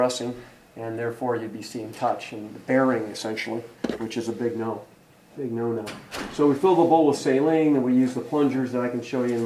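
No technical faults are audible.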